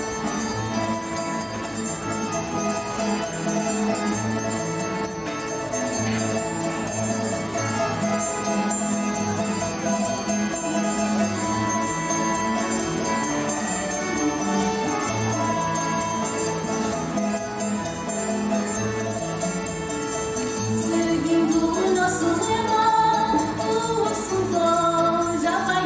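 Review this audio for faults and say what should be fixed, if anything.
No faults turn up in this audio, so nothing needs to be fixed.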